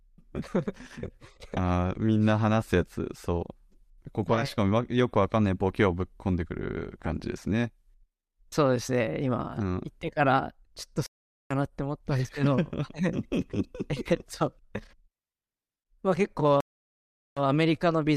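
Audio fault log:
11.06–11.52 s, stream reconnect: the connection dropped, leaving about 0.44 s of silence; a fresh decoder then resumes the speech roughly 0.4 s further on, skipping material.
16.60–17.43 s, stream reconnect: a second break leaves about 0.76 s of silence; after reconnecting, the speech resumes 60 ms earlier, so a short stretch is repeated.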